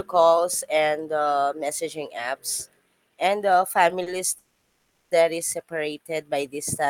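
Speech, with two hitches close together in the second half. At about 4.02 to 4.08 s, just before "that is", there's a short stall from a late packet. The sound in progress gets held for roughly 40 ms with a faint buzz or dip, then picks up exactly where it left off, so nothing is lost. The jitter buffer ran dry while it waited for one late packet, and everything after that point lands about 40 ms later.

Then at 4.38 to 5.13 s, again right before "that is", comes a proper call audio freeze. The last sound is stretched into a buzz or hiss that fades out and ends in about 20 ms of silence, some 730 ms in all, before the speech resumes with nothing skipped. It likely comes from packets being held up in the network long enough to empty the buffer, and it pushes the rest of the audio about 730 ms later.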